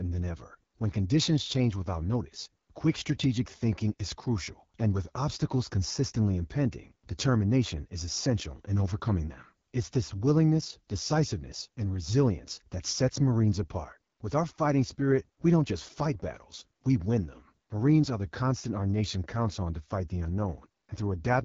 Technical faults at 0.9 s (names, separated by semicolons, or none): AMR wideband (HD Voice) codec